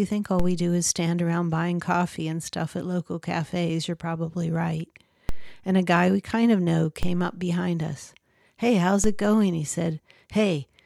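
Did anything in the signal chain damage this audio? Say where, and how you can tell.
Yes: a DC step at 0.40, 5.29, 7.03 and 9.04 s, each a low thump as the waveform's zero line jumps by about −15 to −16 dBFS at the converter or analogue input, then decays through a 2 Hz high-pass while the speech continues unchanged.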